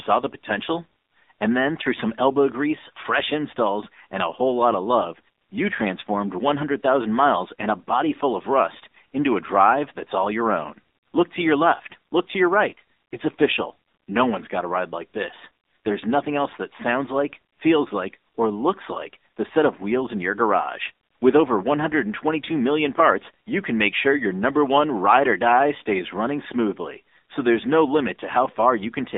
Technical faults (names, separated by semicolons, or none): AMR narrowband mobile codec; AMR bit errors